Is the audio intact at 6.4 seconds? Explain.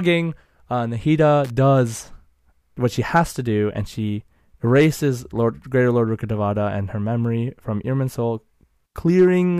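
Yes, at 6.4 seconds the speech is intact, with no audible dropout, click, distortion or other fault at that moment.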